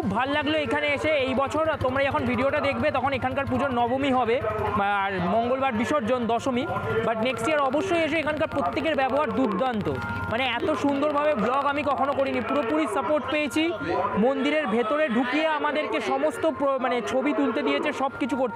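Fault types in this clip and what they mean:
Train of clicks: regular ticking at 13.9 clicks per second from 7.23 to 12.71 s, about 5 dB above the sound, likely external interference.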